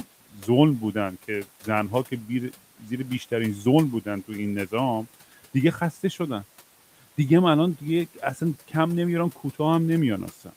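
At 0.34 to 0.47 s and again at 2.8 to 2.9 s, there's speech cut by the noise suppressor. It misread brief bits of speech as noise and pulled them down by about 8 and 9 dB, so each short stretch sounds faint and swallowed, while the room noise stays about 22 dB under the speech.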